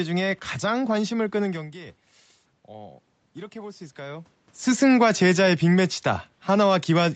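From 2.66 to 4.38 s you get automatic gain rising. After the talker drifts back from the mic around a second and a half, the level reaching the processing drops by about 17 dB, so the gain control decides things are too quiet and slowly cranks itself up by about 4 dB. You can hear the voice and the room noise swelling together over that stretch of nearly two seconds, before the talker moves again around 4.5 s.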